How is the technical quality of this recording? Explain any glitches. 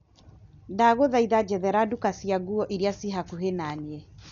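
The technical quality is poor, with heavy codec damage throughout. Likely Dolby Digital compression, present for the whole clip: at what sounds like a very low bitrate, around 48 kbps, the encoder cuts everything above 6.9 kHz and starves many frequency lines of bits, filling them with noise. The speech sounds dull and muffled, with rough, fluttering noise.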